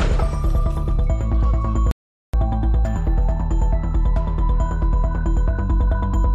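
At 1.91 s the sound cuts to dead silence for about 0.42 s, until 2.34 s. That's an audio dropout to silence, likely a lost input while silence kept recording.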